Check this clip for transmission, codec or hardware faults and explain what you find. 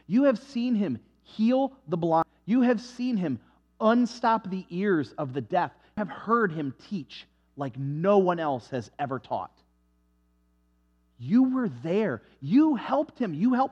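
Two abrupt skips are present, at 2.23 s and 5.98 s, consistent with audio missing between chunks. Around a third of a second of sound vanishes at each point, and the material either side is butted together with no silence, so the sound jumps forward. The likely cause is a recorder or processor working in 4-second chunks and dropping audio at each handover. On a waveform or spectrogram, each skip appears as a hard vertical seam where the content changes discontinuously.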